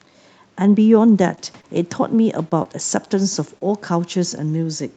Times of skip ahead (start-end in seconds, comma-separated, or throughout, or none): none